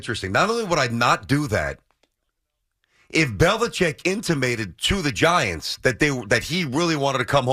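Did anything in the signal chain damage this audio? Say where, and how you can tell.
No, nothing along the chain seems to have hurt this speech; every stage from capture to playback passes it along without leaving a mark you can hear.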